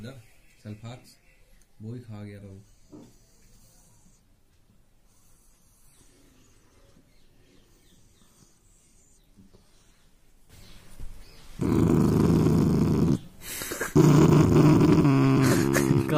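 No technical faults can be heard anywhere in this audio.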